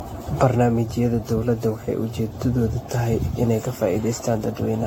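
Generation loss runs throughout the speech: it sounds swirly, hollow and smeared, with blurred consonant attacks, likely from around seven AAC-LC re-encodes at what fits 64 kbit/s. A spectrogram shows smeared transients and nothing above 16.6 kHz.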